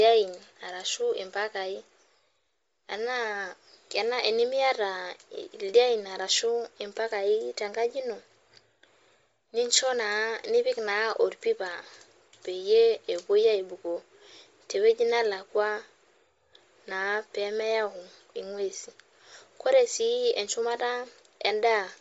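From start to finish the speech carries a breathy, grainy edge, with the upper band replaced by hiss-like noise. This is likely Bluetooth LC3 compression, the LE Audio codec, running at a low rate that fits roughly 32 kbps with 7.5 ms frames.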